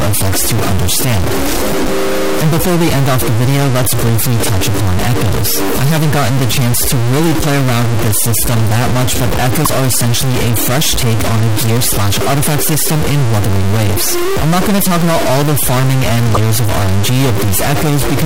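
A stuck bit runs through the whole recording, giving grainy noise or buzzy distortion over everything and a hiss in quiet passages. This is likely one data bit frozen at a fixed value, throwing roughly half the samples off by that bit's weight. Broken MP3 bit reservoir damage appears at 9.64 to 9.66 s and 16.33 to 16.37 s as brief glitches where the audio skips ahead. The likely cause is dropped 24 ms frames, leaving the next frame to decode borrowed bytes from the wrong data.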